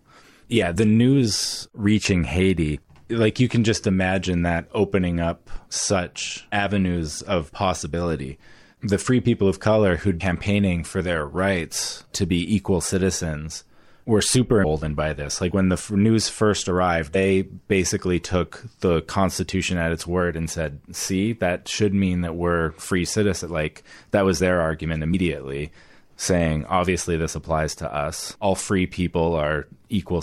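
Damaged data in the compressed stream makes the decoder misread frames, lose sync and hunt for the next header. Each time a brief glitch cuts into the speech: 10.20 s after "people of color who'd", 14.63 s, 17.14 s between "news first" and "basically took the", and 25.13 s after "that was their argument".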